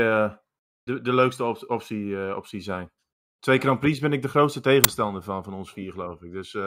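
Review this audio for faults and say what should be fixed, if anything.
At 4.84 s, between "ben ik de grootste" and "van van", a hard-edged burst of very loud white noise cuts in: file tags played as audio. The decoder read an embedded compressed cover picture as speech samples. To prevent it, parse and skip metadata blocks before decoding.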